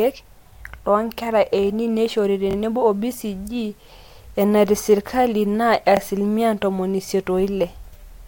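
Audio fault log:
2.51–2.55 s and 5.97–5.99 s, repeated buffer: right after "loonkera eini neishori" a roughly 23 ms slice plays twice more, and just before "ntomoni isiet" once more, since fresh audio came late. Each hard join gives a quick stutter, fitting a 1024-sample buffer, with nothing apparently lost.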